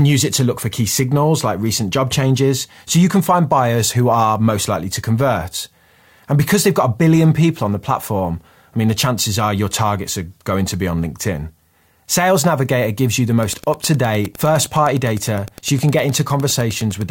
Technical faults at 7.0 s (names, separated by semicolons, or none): none